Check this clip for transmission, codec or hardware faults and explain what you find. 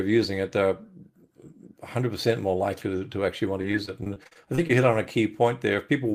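One transmission fault is present: repeated packet loss (robotic sound) between 3.61 and 4.71 s of the speech. Over that stretch, audio packets go missing or arrive too late again and again. Each hole, the longest about 40 ms, is patched by extending the preceding sound, and the next hole arrives shortly after. About a fifth of that interval is concealed this way, so the speech turns choppy, with fragments missing.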